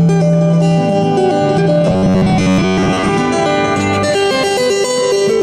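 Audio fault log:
1.87–3.10 s: robotic sound from repeated short buffers. The audio turns into a rigid, metallic buzz locked at a steady 93.8 Hz, and the original sound survives only as a loose outline under that fixed tone. The likely cause is input arriving too seldom, so playback keeps looping a fragment of about 10.7 ms, one period of the buzz, to fill the gaps. Around 70 percent of this stretch is repeated material rather than new audio.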